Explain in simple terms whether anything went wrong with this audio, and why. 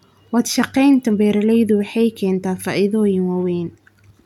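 Nothing went wrong with this speech recording: I hear no technical fault anywhere in it.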